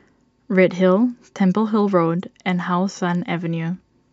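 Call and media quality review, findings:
No findings in this call and media quality review.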